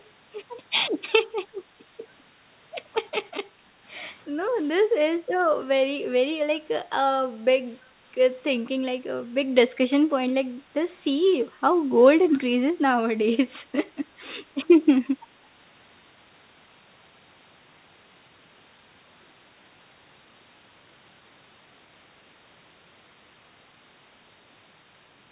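A short echo leak opens the speech recording, from 0.00 to 0.07 s. A very faint copy of the speech can be heard trailing about 0.33 s behind the original. It sits roughly 35 dB below the direct speech, so it is barely there. The likely cause is a loudspeaker on the far end whose echo canceller let some of its microphone pickup through, which was then sent back down the line. Between 3.50 and 3.74 s the background is gated by the echo canceller. The room sound dips by up to about 6 dB, then comes back. The affected stretch totals around 150 ms. The canceller pulled the microphone down while the loudspeaker was playing, then released it. The call path itself runs through G.711 A-law, consistent with a 64 kbps stream, and nothing is heard above 4 kHz.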